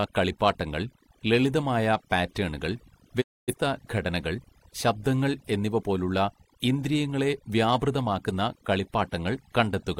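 Overdone noise removal affects the whole speech clip. The noise reduction was set too aggressively, so individual frequency bands that sit close to its noise estimate are pulled far down or switched off entirely, and the quieter components of the voice are removed along with the noise. The background drops to near silence scattered with twinkling specks.

At 3.20 s a digital broadcast dropout cuts the sound for about a third of a second, until 3.54 s. The receiver stopped getting usable frames, either losing the signal or rejecting frames that failed their checksum, and muted until valid data resumed. The audio fades to silence over about 20 ms rather than cutting instantly, and the gap points to several consecutive frames lost, roughly a quarter-second of programme that is simply missing when the sound returns.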